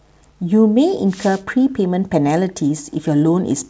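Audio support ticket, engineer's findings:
Wireless microphone noise hit, 1.07 to 1.43 s. Short swish of static rising over the speech for about 0.36 s, then clearing. Probable component: analogue FM radio mic link. Mechanism: multipath reflections cancelling the RF carrier at the receiver, signal fading and receiver noise climbing into the audio until the carrier recovers. Band tops out at 8 kHz, consistent with the G.722 wideband call codec on the downstream call path.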